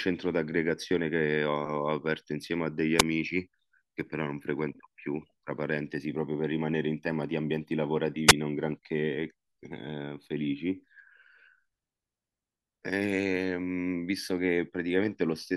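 At 2.98 s and again around 8.27 to 8.33 s there's a wireless microphone squelch dropout. The radio link fades, hiss swells briefly, the receiver's squelch snaps the speech shut for a split instant, then it comes back, all within about 50 to 60 ms.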